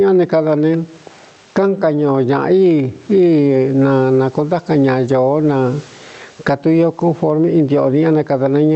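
Throughout, gain pumping makes room noise swell by about 15 dB in pauses and duck under loud speech, likely excessive gain driving a fast limiter.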